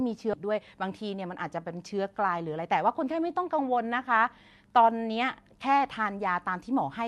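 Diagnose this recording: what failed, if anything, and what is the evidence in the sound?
Skip ahead at 0.33 s, a network or jitter-buffer fault: roughly 400 ms of speech is missing, and the two sides are butted together with no fill. The buffer discarded late or overflowing audio and jumped to material already queued, cutting the delay abruptly.

Jitter buffer speed-up from 0.43 to 1.57 s, in the buffer stage: speech runs at about 111% speed with unchanged pitch and sounds hurried. The receiver trimmed repeated pitch-period slices, together removing something like 150 ms, to drain excess buffered delay.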